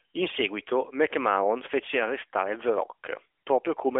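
No technical faults occur anywhere in the speech, which is carried over an AMR-NB narrowband mobile link at 12.2 kbps.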